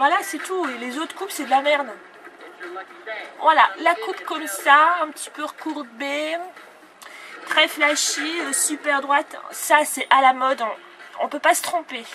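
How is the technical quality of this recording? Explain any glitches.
No glitches or technical faults can be heard anywhere.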